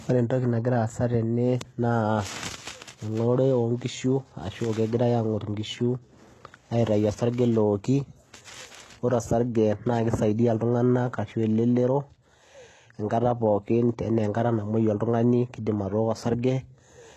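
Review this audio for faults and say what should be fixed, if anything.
Throughout the speech, sibilants sound gritty and metallic, with nothing above 12.3 kHz. The likely cause is HE-AAC compression: its treble is rebuilt from copied lower bands, which fits a bitrate around 16 kbps. Encode at a higher bitrate or with plain AAC.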